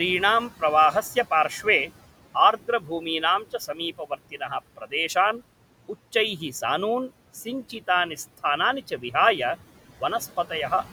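From start to finish the clip carries noise suppressor artifacts. The suppressor pulls the room noise down by about 17 dB in the gaps, then lets it back up whenever speech returns, so the background (sitting about 18 dB below the speech) pumps in and out with the talker.

The same processor also does speech cut by the noise suppressor, misreading quiet parts of the speech as noise and attenuating them along with the background. This happens at 2.80–3.05 s (down about 9 dB), 3.44–3.80 s (about 12 dB), 3.98–4.51 s (about 18 dB, the deepest and longest), 4.77–4.93 s (about 16 dB), and 8.90–9.14 s (about 7 dB). Only brief portions within each span are affected, from about a tenth to a fifth of a second. There, the affected speech sounds swallowed or faded.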